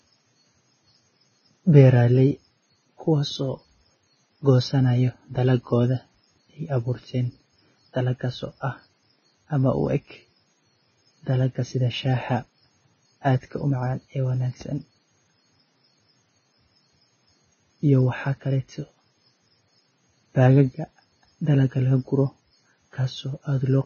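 Throughout the speech, the audio has likely passed through heavy Vorbis compression at a very low bitrate, consistent with something around 16 kbps. At that rate the encoder discards everything above about 6.5 kHz and replaces the remaining fine treble detail with coarsely quantised noise of similar energy. The result is a dull, band-limited sound with a hissy, grainy texture over the upper range, roughened tonal quality and softened, smeared consonant attacks.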